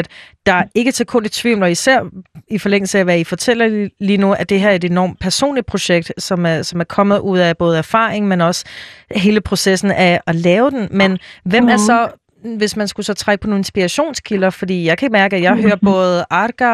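Speech with MP2 compression throughout. It sounds dull and gurgling, with granular distortion as upper sub-bands flicker off. The likely cause is a low bitrate, near 80 kbps.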